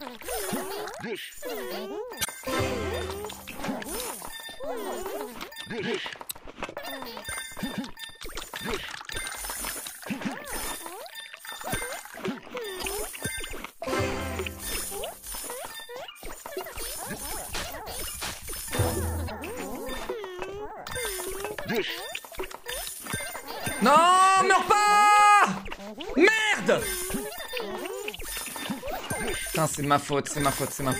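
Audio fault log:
2.21–2.28 s, 12.79–12.86 s, 17.10–17.18 s, 19.24–19.31 s: damaged data in a compressed stream. Corrupted bytes make the decoder misread frames and hunt for sync, so each event is a brief glitch of about 70–80 ms.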